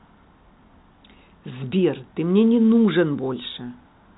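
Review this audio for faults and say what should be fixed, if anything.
Nothing here needs fixing; the speech comes through as ordinary G.711 telephone audio, topping out around 3.9 kHz as that format should, with no faults to chase down.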